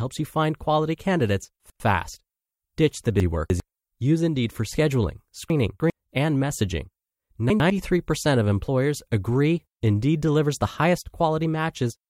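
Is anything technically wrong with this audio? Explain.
Yes. The speech has chunks out of order at 1.6 to 1.8 s, 3.2 to 3.6 s, 5.5 to 5.9 s and 7.5 to 7.7 s. In each, a 100 ms block of audio arrives late and plays after the blocks that should follow it: one block late at 1.6 and 7.5 s, three blocks late at 3.2 and 5.5 s. Nothing is missing, but the sequence jumps, leaving three abrupt joins per event. The result is a brief jumbled moment.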